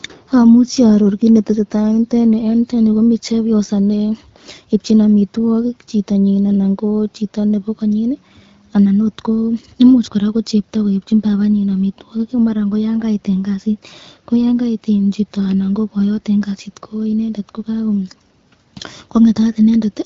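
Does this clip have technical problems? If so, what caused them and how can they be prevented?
No, this clip has no technical problems, so there is nothing that needs preventing.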